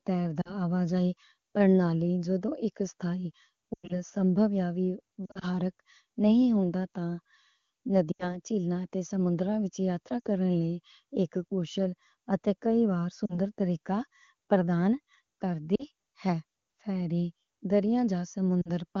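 Lost AMR speech frames: corrupted frames failed their checks, so the wideband decoder repeated the last good pitch and vocal tract settings at falling gain. This is heard as brief warbles or dips at 0.41–0.51, 5.26–5.45, 8.12–8.37 (just before "تھیلا تے سموں نگترامہ"), 10.20–10.27 (just before "لےکہ کُشُل اتے کیجیا"), 13.26–13.38, 15.75–15.84 and 18.61–18.70 s. After "سو تے اک سٹائی", a 100 ms run within 3.73–3.99 s smears the sound and fades it toward silence.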